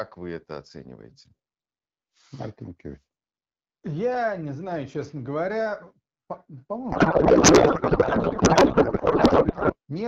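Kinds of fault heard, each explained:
Codec payload misread: from 6.91 s to 9.73 s the speech gives way to garbled noise and warble that barely tracks it, until clean speech returns at the end. The decoder is reading well-formed frames with every field shifted out of place. The sound fits octet-aligned AMR packing being unpacked as bandwidth-efficient, so the wideband decoder, which sounds clear beforehand as at about 12.65 kbit/s, rebuilds nonsense parameters.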